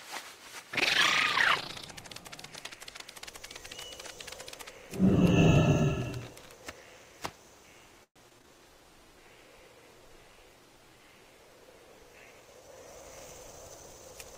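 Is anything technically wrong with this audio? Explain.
Yes, three faults, all in the second half.

Repeated packet loss (robotic sound), 8.03 to 8.59 s: four gaps in quick succession, the longest 122 ms. Each gap is patched by stretching the previous sound, so about 38% of this span is filled-in audio and some pieces drop out entirely. The result is choppy and robotic.

Call bitrate drop, 8.68 to 13.03 s: right after the dropouts, the sound turns coarse, watery and duller for over four seconds. This is consistent with the encoder being forced from around 48 down to 15 kbps, so it codes more roughly and trims the high frequencies.

Jitter buffer speed-up, 12.11 to 12.93 s: within that degraded stretch, the receiver drains excess buffered audio by cutting short pitch-period slices repeatedly, about a tenth of a second in total. Playback runs roughly 11% fast at unchanged pitch, so it sounds hurried.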